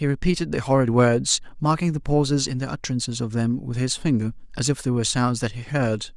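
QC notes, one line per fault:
No faults found.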